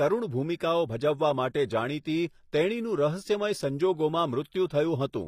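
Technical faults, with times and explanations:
Throughout, HE-AAC compression. The speech has plainly audible codec damage, and the treble sounds rebuilt rather than captured. Nothing is present above 15.5 kHz. The upper band is likely synthesised by spectral band replication, copied up from lower bands and shaped by a coarse envelope. The harmonics up there do not match those below the crossover. So s sounds come out gritty and metallic. The damage is consistent with a low bitrate of around 24 kbps.
0.57 s and 4.67 s, pre-echo. Each time a short hiss rises just before a sharp onset, spread over about 33 ms and 37 ms. The first comes just before "ભજવવા માટે". The codec spreads its quantisation noise across a whole block. The noise meant for the loud attack also fills the quiet gap ahead of it. The onset therefore sounds softened and smeared, not crisp.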